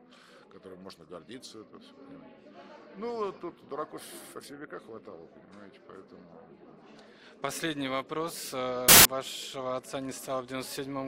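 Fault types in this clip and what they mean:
Samples built from the wrong bytes: the reader assembles each sample's bytes out of order or misaligned, so rapidly changing low bits dominate, giving a burst of loud, harsh broadband noise from 8.89 to 9.05 s. Unlike clipping or dropout, it's harsh broadband noise.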